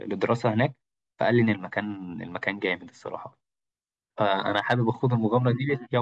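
No dropouts, clicks, distortion or other technical faults are audible anywhere in the recording.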